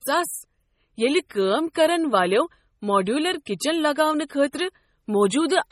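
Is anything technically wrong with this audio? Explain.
Yes. The whole clip carries heavy MP3 compression damage, likely from a low bitrate around 32 kbps. Nothing is present above 16.1 kHz. Short of bits, the encoder cut the treble and zeroed weak frequency lines that flicker between frames. The speech sounds watery and swirly, with metallic chirps on s sounds.

There is a pre-echo at 3.46 s, spreading about 14 ms before an attack. The codec spread quantisation noise across its whole block, so noise meant for the loud attack leaked into the quiet moment before it. A brief hiss precedes the attack, which sounds soft and smeared.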